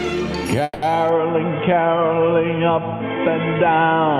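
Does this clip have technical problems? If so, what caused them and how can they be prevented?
Yes. From 0.63 to 0.84 s there is a call audio freeze: the sound is stretched into a decaying fill for about 190 ms, with a brief silence of about 20 ms, then resumes where it stopped, now 190 ms late. Delayed packets likely emptied the jitter buffer. A more stable network path or a deeper adaptive jitter buffer would prevent it.

From 1.09 s to the end, the input switched to a poorer device. The sound turns dull with nothing above 3.4 kHz, and a faint new noise floor appears. There is no gap and no real level jump, likely a change to a headset call profile. Locking the input device during recording would prevent it.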